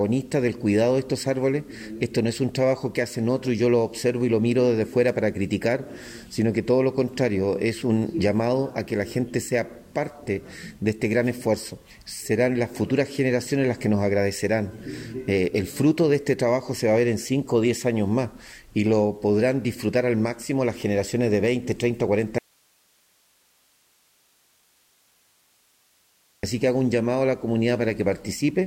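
The audio has a dropout to a faint residue from 22.38 to 26.43 s: the signal cuts abruptly, leaving about 4 seconds of hiss far below normal level, likely a break upstream while the path stayed live. The waveform collapses to a thin noise band; the spectrogram shows diffuse broadband speckle with sharp vertical edges.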